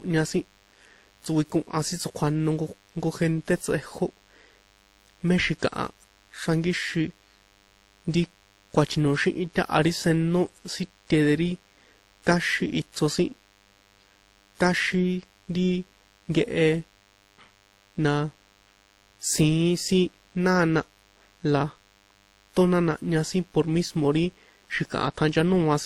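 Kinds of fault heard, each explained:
DECT cordless phone buzz: Radio bursts every 10 ms are rectified in the audio circuit, giving a steady, thin 100 Hz buzz with dense harmonics, sitting faint beneath the speech throughout.
Transcoding between lossy codecs: Mixed coding artefacts run through the whole clip, with nothing above 20 kHz, likely from a low-rate Opus-like encode later re-encoded as WMA.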